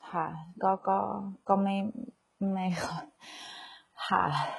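Throughout, the speech has a coarse, rebuilt treble that sounds gritty and lispy on s sounds, with nothing above 11.4 kHz. This is likely heavy HE-AAC compression at a very low bitrate.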